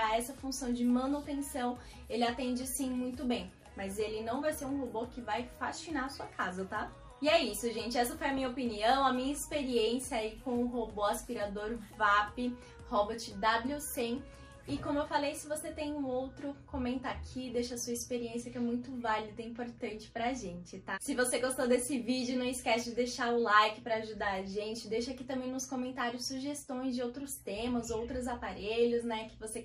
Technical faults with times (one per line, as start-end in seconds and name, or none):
0.00-29.64 MP2 compression
8.23-8.80 DAB burbling